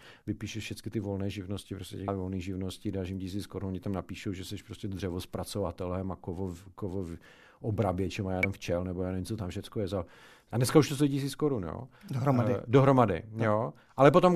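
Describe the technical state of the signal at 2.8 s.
At 2.8 s the speech signal is intact, with no audible technical fault at that point.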